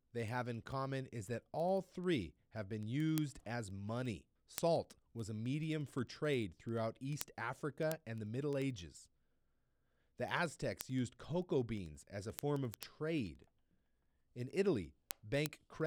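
A steady train of sharp ticks runs under the speech from 0.11 s to 15.81 s, arriving roughly ten times a second and varying in strength from click to click. These are word clock ticks: the receiving device was clocked independently of the digital source, and the two drifted by a few hundred parts per million. At every slip a single sample was dropped or repeated, leaving a tiny discontinuity that sounds as a tick.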